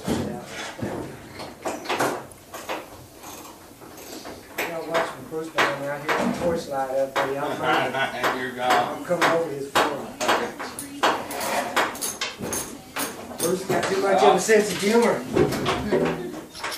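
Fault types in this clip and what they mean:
No fault types are present in this clip.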